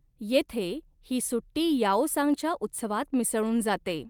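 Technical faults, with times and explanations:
No technical faults are audible anywhere in the speech recording.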